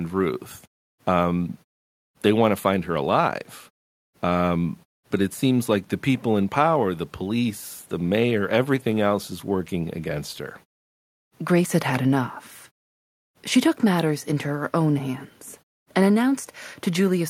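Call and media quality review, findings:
No faults found in the speech path: room noise sits about 38 dB below speech, and the output mutes to silence in pauses and returns in time for the next sound, losing only very quiet sound.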